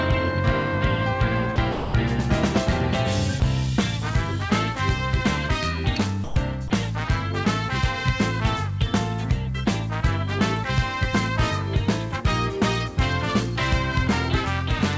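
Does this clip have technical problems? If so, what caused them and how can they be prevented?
Yes. At 1.56, 1.72 to 1.94, 3.40, 6.24 to 6.36 and 6.68 s, the sound gives way to flat, even noise. On a spectrogram these are smooth, featureless patches, and on a waveform they are low, uniform stretches. This is likely sound dropped by the voice detector, with comfort noise filling in. Adding hangover time or lowering the detector's threshold would prevent it.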